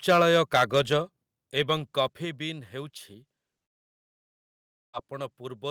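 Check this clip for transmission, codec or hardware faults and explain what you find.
Three faults are audible: overload distortion, stepped level drops, and a long gap.

From 0.09 to 0.93 s, peaks sound harshly flattened and crackly. The likely cause is microphone overload, driving the converter about 7 dB past its limit, clipping a few percent of samples.

Level drops suddenly at 0.22, 1.23 and 2.25 s, by about 2, 5 and 4 dB. The microphone volume is likely stepped down.

From 3.63 to 4.95 s, about 1.3 s is lost. A brief fading tail gives way to near-silence. This is likely a long network dropout.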